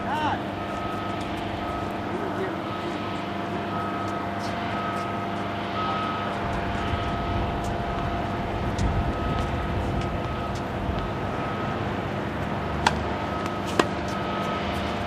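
No technical faults can be heard anywhere in the audio, and the signal stays steady and intact throughout.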